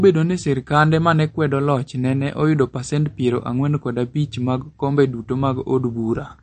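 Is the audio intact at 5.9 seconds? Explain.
No. At 5.9 seconds, as throughout the clip, the speech carries plainly audible MP3 compression damage, likely from a low-bitrate encode. Nothing remains above 8.6 kHz, so the treble is cut at a fixed edge and sibilants lose their top. Weak frequency components drop in and out between frames, giving a watery, swirly texture and softened attacks. The degree of damage fits a bitrate around 40 kbps.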